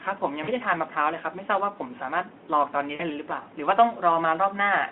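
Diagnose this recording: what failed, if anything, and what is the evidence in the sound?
VoIP packet loss concealed by the speech codec at 0.43 and 2.95 s: 40 ms network gaps, which the Speex decoder bridges with an extrapolated, fading sound.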